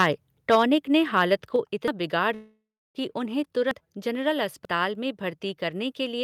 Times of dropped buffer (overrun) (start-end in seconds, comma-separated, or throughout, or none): 1.88, 3.71, 4.65